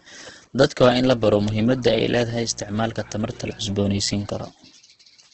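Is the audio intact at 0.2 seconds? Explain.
No. At 0.2 seconds, as throughout the clip, the speech sounds rough and grainy, with nothing above about 8.2 kHz. This is likely heavy Opus compression, which points to roughly 12 kbps in music mode, where starved bands get filled with noise.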